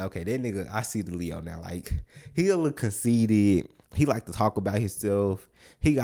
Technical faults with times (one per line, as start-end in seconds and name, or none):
none